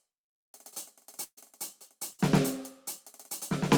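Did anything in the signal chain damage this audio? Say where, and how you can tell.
Yes. The damage came from the network: two bursts of packet loss, at 1.23 to 1.39 s and 2.13 to 2.21 s. With nothing arriving to play, the receiver extended the last music it had and faded it down. That concealment lasts 135 ms in the first gap, ending in about 50 ms of silence, and 56 ms in the second. The music then resumes further along, with about 140 ms and 60 ms of material missing.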